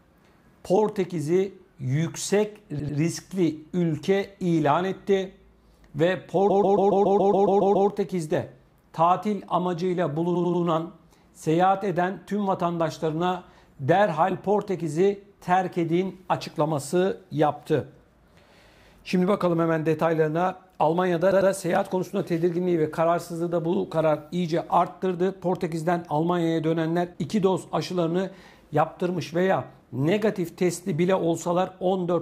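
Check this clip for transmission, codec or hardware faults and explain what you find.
Repeated frames, four times: short runs of compressed data were played again, so a block of about 90 to 140 ms loops as a stutter. At 2.78 s a 92.9 ms block plays twice more. From 6.49 to 7.88 s a 139.3 ms block repeats ten extra times. At 10.34 s a 92.9 ms block plays three extra times. At 21.30 s an 88.5 ms block plays twice more. Each run stretches the audio by the repeated time.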